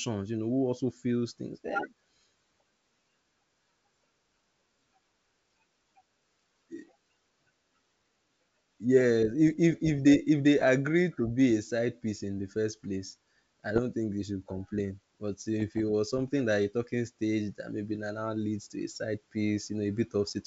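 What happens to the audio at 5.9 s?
Nothing goes wrong at 5.9 s; the speech there is intact, carried cleanly by the wideband G.722 telephone coding at 64 kbit/s with at most a faint trace of its upper-band hiss.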